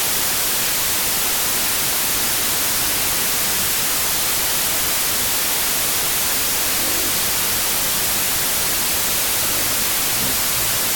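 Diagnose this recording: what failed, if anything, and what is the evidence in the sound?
The failure is at the sample-format conversion stage: a wrong sample width across the whole recording. Loud broadband noise buries the original, which plays at half speed and an octave low. This points to 32-bit integer data read as 16-bit, splitting each sample into two mismatched values.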